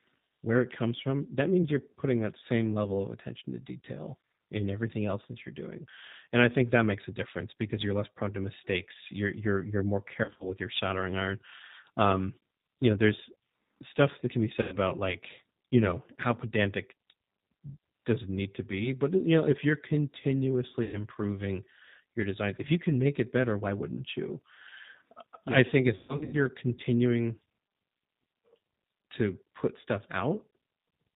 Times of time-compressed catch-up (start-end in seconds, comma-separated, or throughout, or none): none